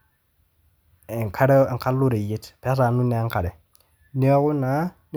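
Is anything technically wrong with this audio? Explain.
No, nothing technically wrong can be heard here.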